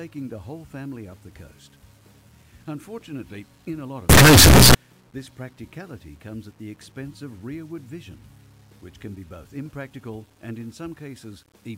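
Signed and unsigned mixed up, 4.10 to 4.75 s: sudden, very loud, harsh distortion, likely 8-bit samples read with the wrong sign convention, flipping the top bit.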